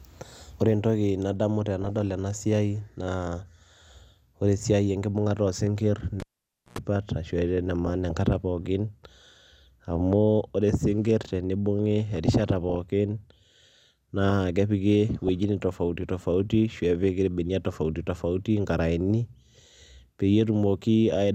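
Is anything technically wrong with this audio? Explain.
Yes. The speech has two kinds of fault.

DAB burbling occurs at 1.82–2.01 s (between "entoki nadamu" and "ena siai"), 7.83–8.36 s, 9.95–10.12 s (just before "ore sinkir tenibung'i"), 12.16–12.77 s (just after "ore sinkir tenibung'i") and 15.16–15.69 s. Residual bit errors from a weak signal corrupt the MP2 data, so sub-bands jump in level and short blips of noise appear in single sub-bands.

A cable pulled and plugged in occurs at 6.20–6.79 s. A pop is followed by about 0.54 s of near silence and then roughly 0.1 s of 60 Hz mains buzz as the plug tip reconnects. A second pop marks the sound's return.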